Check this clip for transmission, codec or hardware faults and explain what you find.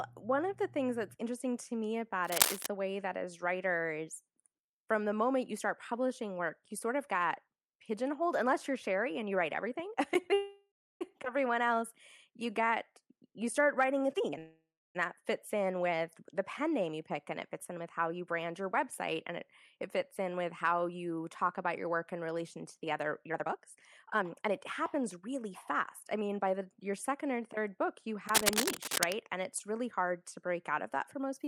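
Yes, there's quite a bit going on in this speech clip: handling noise at both ends and a cluster of network-related timing faults in the middle.

Cable scratch noise turns up at 2.24–2.67 s and again at 28.29–29.14 s. You get a dense, uneven rustle riding over the speech, roughly 5 dB louder than the speech the first time and about level with it the second. It's likely a worn cable or connector being moved, with the contact resistance jumping around and spraying bursts of noise into the signal.

There are two call audio freezes, at 10.33–11.03 s and 14.38–14.97 s. Each time the speech stalls while the last sound is stretched into a fading buzz, then about 0.3 s of silence. The gaps add 0.67 s and 0.57 s of delay, but nothing is lost. Playback picks up right where it stopped. That's likely packets held up in transit until the jitter buffer ran dry.

A skip ahead follows at 11.25–11.27 s. 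Playback jumps forward with barely any gap, and roughly 0.4 s of speech is gone, with the two sides butted almost directly together. With audio already queued up after the freeze, a stretch got dropped, which claws back part of that delay in one go.

Jitter buffer slow-down runs from 12.31 to 14.05 s. The speech plays at 91% speed, with 157 ms added, and the pitch doesn't change. Sounds come out drawn out, sometimes with a slight warble, because the receiver repeats single pitch periods or scraps of pause over and over to build its reserve back up.

Jitter buffer speed-up happens three times. The first is a sharp burst at 14.13–14.38 s at 188% speed, removing roughly 0.2 s. The second is a gentle 106% over 16.92–18.41 s, losing roughly 0.1 s. The third runs at 120% over 23.28–26.61 s, with roughly 0.7 s gone. In each case the receiver snips out short pitch-period pieces to shed excess buffered audio. 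The pitch holds steady, but the talker sounds hurried, and in the 188% stretch noticeably rushed.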